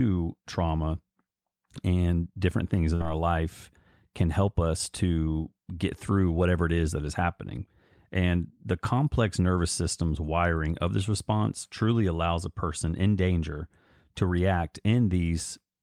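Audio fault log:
2.95–3.04 s burst of packet loss: consecutive packets were lost, so the receiver held and faded the last sound for 47 ms; speech resumes with 40 ms skipped.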